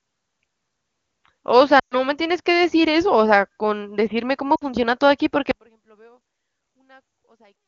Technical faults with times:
1.79-1.96 lost AMR speech frames
4.55-4.64 lost AMR speech frames
5.51-7.68 audio dropout to a faint residue

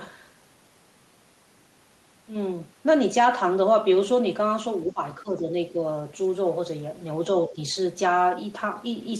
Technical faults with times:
4.93-5.84 speech suppressed in double talk

